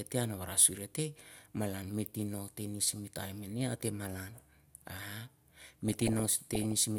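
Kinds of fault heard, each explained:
DAB burbling: Bit errors from weak reception slip past error correction, corrupting sub-bands frame by frame, giving bubbling, squelchy chirps over the speech from 5.88 to 6.75 s.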